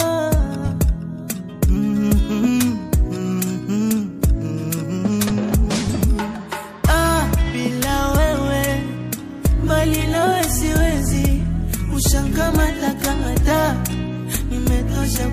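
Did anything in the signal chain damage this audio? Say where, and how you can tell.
Yes, codec pre-echo: at 1.28 s and 4.22 s, hiss about 14 and 11 dB up precedes attacks, showing on a spectrogram as noise smeared ahead of onsets within 36 ms blocks.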